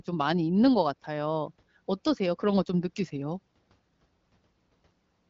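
Speech, and from 3.35 s to the end the sound gains a fine hiss and roughness that the first part lacks. This is sample clock jitter: the converter's clock wanders by something like 10 microseconds, so samples land early or late and the error follows the waveform's slope, sitting roughly 25 dB below the signal. On a spectrogram a noise haze appears under the louder, brighter stretches and clears in pauses, all below the 7.7 kHz ceiling left by the light AMR-WB coding.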